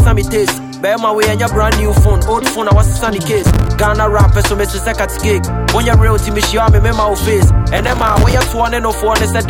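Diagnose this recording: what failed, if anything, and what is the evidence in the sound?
Processor overload crackle, at the driver and buffer stage, appears in two bursts, from 3.41 to 3.69 s and from 7.77 to 8.35 s. Each burst is a gritty, tearing crackle over the sound, ending abruptly once the load eases. Its texture points to dozens of missed buffer deadlines, with buffers on the order of a few milliseconds. Each missed buffer is filled with silence, so the audio is chopped by a rapid train of tiny hard-edged dropouts.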